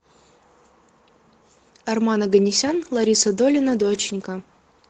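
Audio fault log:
2.27 to 4.89 s, call bitrate drop: the call's bandwidth estimate fell and the Opus encoder was pushed to far fewer bits, consistent with a fall from about 32 kbps to about 11 kbps, bottoming out for 1.61 s. Coarser coding leaves the speech rough, watery and duller than the 8 kHz-wide earlier part, through to the end.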